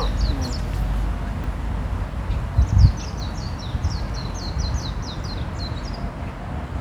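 Dropped buffers (overrun) at 1.44, 3.2 and 5.24 s in this recording of sounds: each is a sudden jump forward, losing about a tenth of a second first, then roughly 40 ms twice, likely from samples overwritten before being read.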